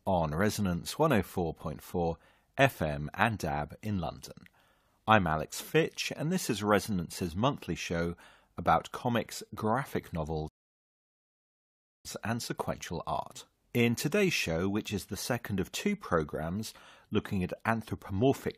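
At 10.48 s, right after "show about comics graphic", a rebuffering stall cuts the speech to silence until 12.05 s, then picks up exactly at "and sequential art". The player's buffer ran dry, adding about 1.56 s without losing anything. A waveform shows a flat gap, and a spectrogram shows an empty band across all frequencies.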